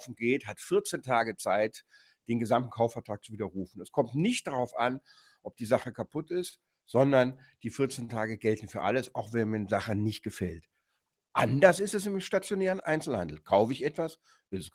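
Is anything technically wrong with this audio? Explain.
Yes. A speech-oriented noise suppressor was left running on this non-speech audio, treating steady and fading content as noise and pulling the level up and down by around 5 dB throughout, so the sound pumps and thins.

Sound cut by the noise suppressor at 0.02–0.22, 1.86–2.29, 3.0–3.28, 5.0–5.61, 10.62–11.08 and 14.17–14.53 s: the suppressor clamped these passages hardest, sinking them by about 14, 21, 16, 21, 19 and 11 dB, so they dip or lose their tails.

A short stall from a late packet occurs at 6.49 s and 8.05 s. Each time a packet arrived late, the receiver held the last sound for about 32 and 34 ms rather than dropping anything, producing a brief smeared hold. The second stall also adds 9 ms.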